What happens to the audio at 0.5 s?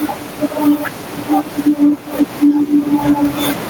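Gain pumping runs through the whole clip, including 0.5 s: the speech level keeps dipping and recovering by around 10 dB, squashing loud and soft parts together. The likely cause is a fast limiter fighting excessive microphone gain.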